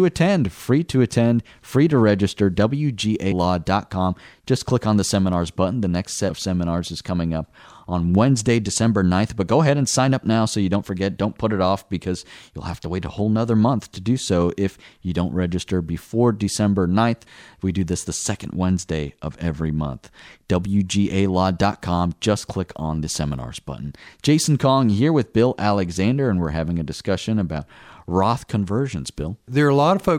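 A speech recording with compressed frames skipped at 3.31, 6.29 (just before "seminars is coming up") and 17.26 s. Each time a few 26.1 ms frames go missing, about 100 ms at the first and about 70 ms at the others, so the speech jumps ahead with a short smeared blip rather than a click.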